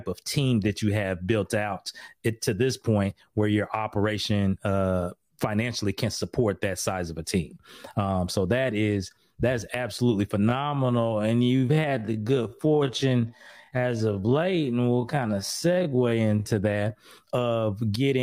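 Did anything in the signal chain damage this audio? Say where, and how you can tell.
Yes. From 10.37 to 16.51 s, between "that is that's absolutely" and "that of getting you", the pace suddenly drops to about 0.55 times normal while the pitch holds steady, and the slowed stretch drags. That points to a time-stretched section, likely from software that padded the audio by repeating short slices. A sample-rate or playback-speed error would drag the pitch down along with the tempo, so the unchanged pitch rules that out.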